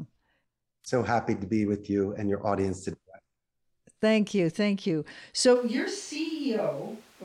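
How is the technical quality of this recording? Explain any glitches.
The recording has one glitch, near the end. From 5.57 s to the end, the speech suddenly turns hollow, roomy and thin, about 10 dB quieter with more room noise, likely from a switch to a distant microphone. A plain gain drop would not add reverberation or change the tone.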